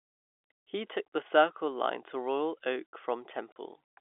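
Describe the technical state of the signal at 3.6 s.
Just before 3.6 s, from 3.52 to 3.56 s, the speech drops out for 40 ms: packet loss filled with silence, which fits two 20 ms packets lost and replaced by silence. It sounds like an abrupt hole with hard edges. The waveform shows a flat gap with vertical cut edges, and the spectrogram shows a blank column inside the narrow telephone band of the G.711 line.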